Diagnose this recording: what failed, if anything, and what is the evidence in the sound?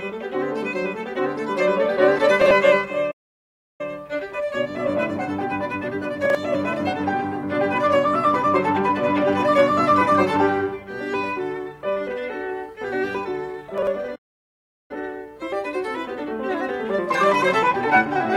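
The music briefly jumbles at 2.42–2.51 s, 6.25–6.35 s and 13.78–13.87 s. Each time, a segment of about 46 ms plays one slot late, swapping places with its neighbour and leaving three hard joins. These are chunks out of order at the driver or buffer stage.

The music drops to silence mid-flow at 3.11–3.81 s and again at 14.15–14.91 s, for about 0.68 s and 0.74 s respectively, before carrying on. This is a playback stall, likely caused by the player running out of data or its output thread being blocked until it recovered.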